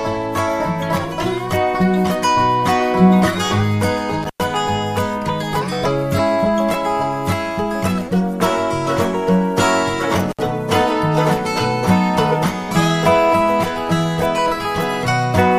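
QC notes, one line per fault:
4.23 to 4.40 s and 10.31 to 10.39 s: intermittent contact. The sound drops out twice, for about 103 ms and then about 69 ms, with a crackle at each edge of the gap and faint hiss in between. This points to a loose plug or cable conductor briefly losing connection. The crackle comes from the contact scraping as it opens and recloses. While the circuit is broken, the signal is gone, so only low-level noise remains.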